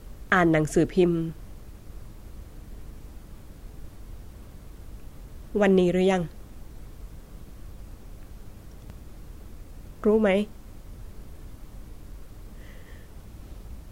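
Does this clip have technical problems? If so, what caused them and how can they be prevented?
Yes. At 0.3 s and again at 8.9 s the speech jumps abruptly with no gap of silence, skipping roughly 20 ms and 10 ms respectively. This is likely a dropped buffer (overrun): the recording software fell behind, the hardware overwrote samples before they were collected, and the audio on either side was spliced together directly. Giving the capture thread higher priority and using a larger input buffer would prevent it.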